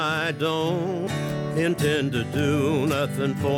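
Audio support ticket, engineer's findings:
Brief glitch at 1.07 s, very short, a few milliseconds. Probable component: decoder input, damaged data in the compressed stream. Corrupted or missing bytes in a frame at that point; the decoder misreads it, loses frame sync, then resyncs on the next valid header and resumes.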